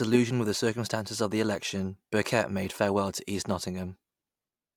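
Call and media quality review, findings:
No faults found in recording.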